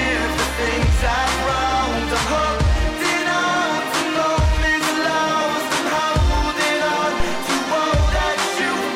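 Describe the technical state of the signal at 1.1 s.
At 1.1 s the music plays through intact, with no dropout, click, distortion or other fault at that point.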